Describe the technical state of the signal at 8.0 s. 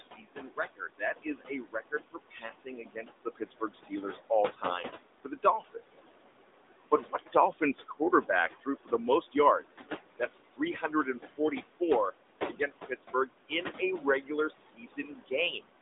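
At 8.0 s the noise suppressor is misjudging parts of the speech as noise, inside a stretch running from 6.91 to 9.65 s. This is speech cut by the noise suppressor. Because its frame-by-frame decision treats quiet speech energy like the steady background, it pulls those bands down along with the noise, by as much as about 17 dB. Over that span, roughly 0.7 s of speech in total is affected. Soft consonants and word endings sound swallowed or faint.

Beneath this, the same suppressor is active across the whole clip, producing noise suppressor artifacts. It cuts the room noise, which sits about 10 dB below the speech, by about 17 dB between words and lets it rise again under them. The speech sits within the narrow 250 Hz to 3.7 kHz band of the phone line.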